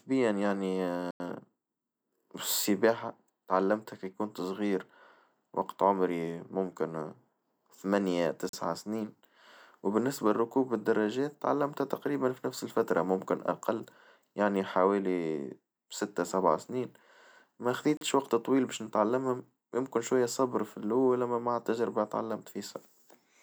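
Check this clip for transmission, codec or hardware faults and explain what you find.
There are three blocks of digital silence in this speech clip. The first runs from 1.11 to 1.20 s, about 92 ms. The second, 40 ms long, comes at 8.49 s, right after "وقت عمري ممكن ثمانية". The third, also 40 ms, falls at 17.97 s, just before "وقت طويل باش نتعلمها". In each one the sound cuts out and comes back with no fade. The longer first block comes across as a short hole, and the two 40 ms ones as briefer holes. That pattern fits the output buffer not being filled in time.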